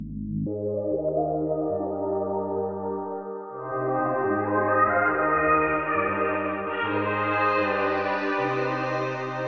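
From 0.47 s to the end, a wrong sample rate fault plays the audio at double speed and an octave (12 semitones) high, which fits 8 kHz material played at 16 kHz. A spectrogram shows every feature shifted up twofold and squeezed in time, reaching about 8 kHz.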